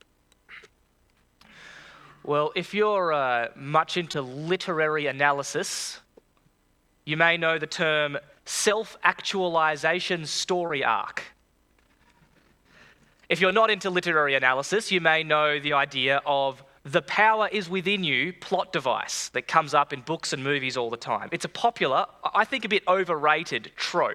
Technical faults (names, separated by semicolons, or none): short concealed packet loss